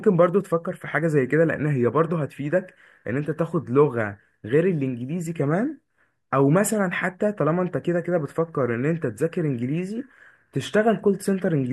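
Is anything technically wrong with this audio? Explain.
No, nothing in the signal stands out as a technical problem.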